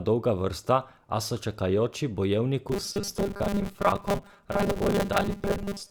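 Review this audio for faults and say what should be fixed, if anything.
From 2.69 s to the end, audio likely arrived too seldom, so repeats of a short buffer filled about half the time, causing robotic sound from repeated short buffers: a rigid 200 Hz buzz, which fits 5 ms repeats. Give the playback path enough buffering or a steadier feed so real audio always arrives before the software needs it.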